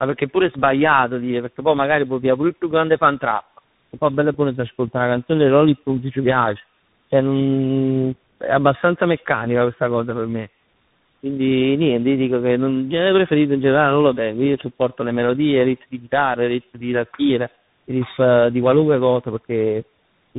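Right through the clip there's tandem speech coding: the call seems to pass through three speech codecs in turn, ending on something that sounds like CVSD. Each stage re-codes the last one's damage, so the speech comes out rough, warbly and muffled, with nothing above about 3.8 kHz.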